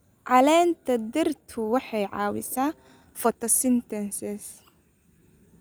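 From 1.32 to 3.56 s there's a time-stretched section: the speech suddenly runs at about 1.45 times its normal pace while the pitch stays put. That's most likely software squeezing this stretch to fit a shorter slot, keeping pitch by cutting out tiny slices of the waveform. You can hear the result as a rushed delivery, and then the pace drops back just as abruptly at 3.56 s.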